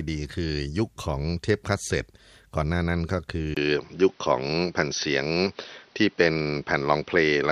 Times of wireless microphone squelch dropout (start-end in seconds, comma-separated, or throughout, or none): none